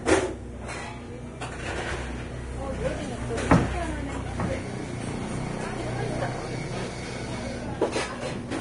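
From start to finish the audio has nothing above 10.6 kHz, and the treble that remains is hissy and grainy, with roughened tonal parts and softened attacks. This is likely Vorbis compression applied heavily, with damage consistent with a low bitrate of around 31 kbps. At that rate the encoder lowers its cut-off and quantises the upper residue so coarsely that fine high-frequency detail is replaced by noise of similar energy, which causes the grain and blur.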